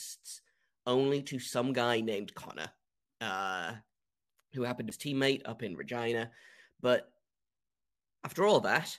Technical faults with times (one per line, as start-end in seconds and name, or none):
4.90 damaged data in a compressed stream